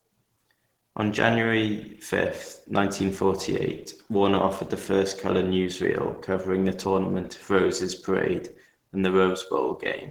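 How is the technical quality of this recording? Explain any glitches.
The recording is clearly degraded by lossy compression. Opus compression damage runs through the whole clip. The speech sounds muffled and hoarse, with a grainy, rough edge. The top end is still present. The likely cause is Opus in its hybrid speech mode, at a low rate near 16 kbps. Starved of bits, the encoder models the voice coarsely and fills missing detail with noise.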